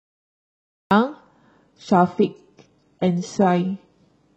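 The recording or stream began late, producing a cut-off start: the first 0.91 s is digital silence, and the speech then appears abruptly at 0.91 s, already in the middle of a sound. There is no natural attack or gradual onset, so the first syllable seems clipped off at the front, as though someone switched the audio on partway through a word.

From 1.65 s to the end, an adaptive stream at a lower bitrate takes over, as the player falls back to a cheaper version when the connection slows. The switch is sudden and leaves no gap. The treble collapses and what remains of the upper range sounds synthetic and metallic, with codec artefacts smearing the consonants. This fits a drop from roughly 96 kbit/s AAC-LC to a 12 kbit/s HE-AAC stream.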